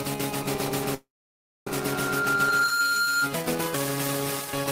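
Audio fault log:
0.82–3.32 s, loudspeaker feedback squeal: A pure tone near 1.4 kHz rises out of the sound over roughly a second and settles into a steady squeal about 5 dB louder than the audio beneath it, then stops at 3.32 s. A microphone is picking up the loudspeaker it drives. At this one frequency the loop's gain tops unity, so each pass round the loop reinforces the tone until the amplifier caps it or the loop is broken.
0.94–1.67 s, call audio freeze: The audio halts mid-flow and the last sound carries on briefly as a fading buzz or hiss, then drops into about 0.59 s of silence before resuming at 1.67 s. The cause is likely a jitter buffer that emptied while packets were held up in transit. The receiver filled the 0.72 s wait by extending what it already had, then carried on from the stopping point. Nothing is lost, but everything after it arrives 0.72 s later.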